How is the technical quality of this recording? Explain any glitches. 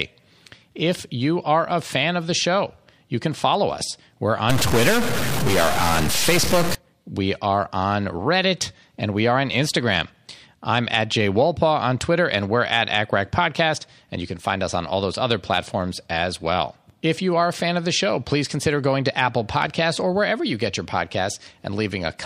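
The recording has one clear fault: a stuck bit from about 4.50 to 6.75 s, ending just before "we are on". For those two seconds the speech turns harsh and buzzy. The gaps between sounds fill with a gritty noise instead of falling quiet. One data bit was likely held at a fixed value, so about half the samples jump by a step near -15 dBFS. The errors follow the waveform's shape, which is why the noise rides along with the speech.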